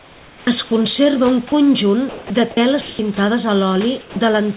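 Right from the start, 0.00 to 0.71 s, the speech sounds chopped by the voice detector. About 500 ms of that stretch is swapped for comfort noise, so the opening is full of holes before "conserva un" comes through. That pattern is likely the sender's detector toggling on and off over quiet material. The same thing happens again from 2.09 to 2.99 s, with about 450 ms replaced, giving that stuttery, gappy texture.

In between, at 1.49 to 1.52 s, just after "conserva un", there's a short sound dropped by the voice detector. About 20 ms of speech is lost and 30 ms of steady noise fills the gap, likely because the detector mistook quiet sound for background. Later, from 4.01 to 4.16 s, a bigger dropout eats about 60 ms of speech, with 150 ms of comfort noise in its place before the speech picks up again.

Across all of this, the room noise sits about 23 dB under the speech, and the call path passes nothing above 4 kHz, which fits a narrowband G.711-style link.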